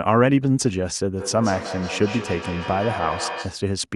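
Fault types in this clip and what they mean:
Feedback echo between two devices: from 1.19 s to 3.73 s each stretch of speech comes back at a steady interval of about a fifth of a second, because a second device in the same room replays the call and the first microphone picks it up again. The returns peak at about 11 dB below the speech and sound thinner and more ringing on each pass, which separates this from a single room reflection or plain reverb tail.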